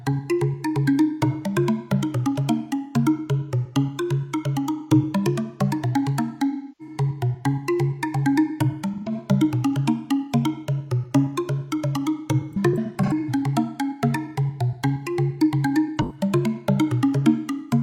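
A recording of everyday sounds with AAC frame loss with concealment in four places: 6.50 to 6.95 s, 8.93 to 9.12 s, 16.0 to 16.2 s, and a scattered run from 12.52 to 13.29 s whose longest gap is around a tenth of a second. Each patch sounds smeared and phasey rather than silent, because the decoder rebuilds missing frames from the last good spectrum. That separates it from plain dropouts, which cut straight to silence.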